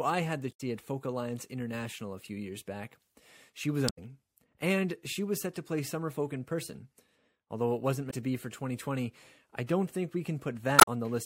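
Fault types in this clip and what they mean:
Damaged data in a compressed stream: corrupted bytes make the decoder misread frames and lose sync until it finds the next frame header. In this speech clip it gives short glitches at 0.49–0.61 s, 3.85–3.98 s, 8.07–8.14 s and 10.79–10.88 s.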